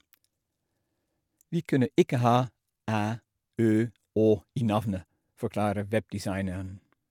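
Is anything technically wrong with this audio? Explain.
No, nothing technically wrong can be heard here.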